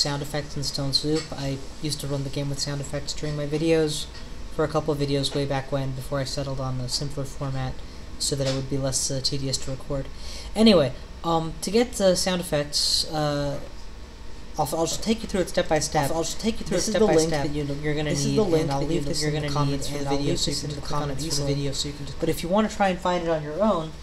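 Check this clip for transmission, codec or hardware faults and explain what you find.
One fault stands out.

A doubled audio track runs from 14.92 to 22.34 s. A full-band copy trails about one and a half seconds behind at roughly the same level, with no decay or room colour, and starts and stops abruptly. It is likely from a second, slower capture path or an edit holding two copies out of step.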